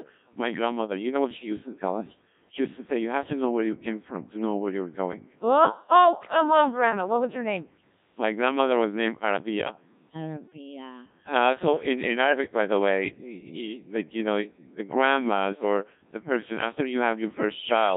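From start to end, the speech runs through a Codec 2 vocoder, and the damage is heavy. The original waveform is gone. Only pitch, voicing, energy and a rough spectral envelope survive, and the decoder rebuilds the voice from sine waves. The result sounds robotic and buzzy. The crudeness points to a very low rate, around 1.3 kbit/s. The band is squeezed to roughly 150 Hz to 3.7 kHz, so the sound is thin and narrow.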